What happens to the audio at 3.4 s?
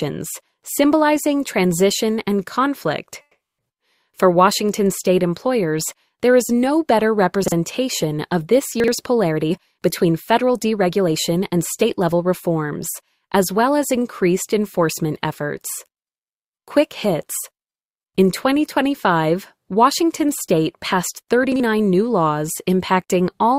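A call audio freeze runs from 3.21 to 3.60 s. The sound stalls, and the last fragment is stretched into a fading buzz that drops to silence for roughly 0.19 s. Playback then resumes from where it stopped, now about 0.37 s late, with nothing skipped. The likely cause is packets held up in transit, emptying the jitter buffer. On a spectrogram, a smeared, decaying band gives way to a blank column. The waveform shows a shrinking envelope, then a flat line.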